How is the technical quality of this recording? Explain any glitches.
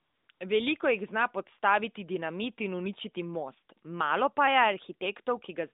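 The audio has one recurring glitch, AMR comfort noise, at the very start. It is heard through a narrowband mobile line that passes roughly 200 Hz to 3.7 kHz, with light codec coloring that fits AMR-NB at around 12.2 kbps.

From 0.0 to 0.28 s and again from 0.32 to 0.4 s, the phone treated the input as silence and stopped sending speech frames. The receiver filled those 275 ms and 80 ms gaps with synthetic noise, so the real background gives way to a smooth, steady hiss that switches abruptly in and out.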